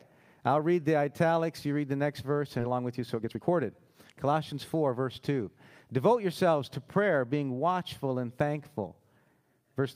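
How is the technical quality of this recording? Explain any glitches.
The recording has two glitches, both in the first half.

At 2.59 to 2.61 s the sound jumps abruptly forward with no gap. This skip ahead drops about a second of audio, and the two sides are spliced almost directly.

From 2.63 to 4.96 s the sound runs hurried, at 118% speed with unchanged pitch. This jitter buffer speed-up trims tiny pitch-period slices, removing about 0.4 s to reduce excess delay.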